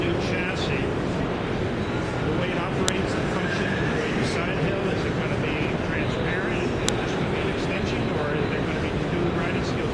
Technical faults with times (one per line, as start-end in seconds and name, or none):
2.88 file header played as audio
6.89 file header played as audio